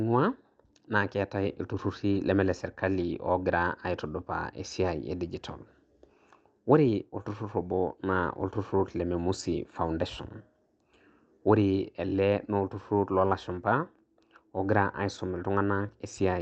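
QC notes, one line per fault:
No faults found in this speech clip, which came over a call path that was working as intended.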